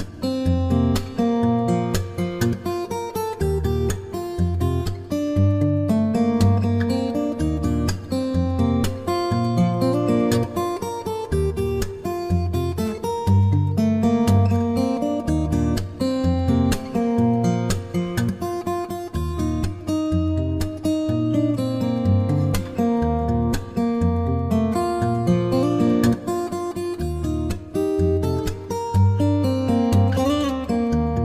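Nothing here sounds wrong at all; the audio just runs along steadily the whole way without a single glitch or interruption to point out.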